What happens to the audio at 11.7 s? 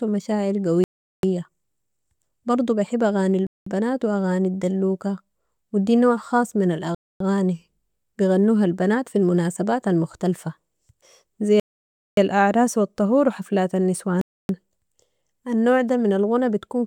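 At 11.7 s the speech drops out completely. From 11.60 s to 12.17 s there is about 0.58 s of dead silence, and then the talker picks up again on "الاعراس و الطهور و". A clean gap like that, where the sound simply stops and resumes, is likely a Bluetooth stall. Radio interference held back the audio packets, the headphones' small buffer emptied, and playback sat idle until the retransmitted data arrived.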